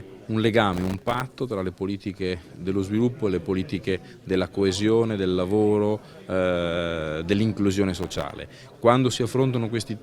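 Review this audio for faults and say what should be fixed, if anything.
Processor overload crackle occurs from 0.73 to 1.21 s and from 8.03 to 8.31 s. Dozens of tiny silent gaps with hard edges are heard as gritty tearing. This fits very short buffers around 1.5 ms being missed. Use larger buffers or reduce the processing load.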